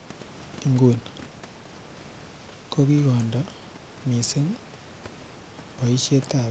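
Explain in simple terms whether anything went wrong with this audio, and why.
Nothing went wrong that a listener would notice: the speech comes through the call as expected, with only the faint room background and the usual call processing you'd expect on any ordinary call.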